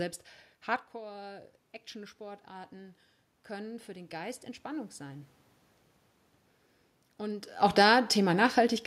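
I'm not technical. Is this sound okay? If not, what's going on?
No. Automatic gain rising, from 0.92 to 5.36 s: after the speaker moves away around half a second in, the automatic volume control slowly turns up, so voice and room noise swell together.

Automatic gain falling, from 7.63 to 8.81 s: once the speaker moves around 7.5 s, the control eases the volume back down, and the voice sinks along with its background.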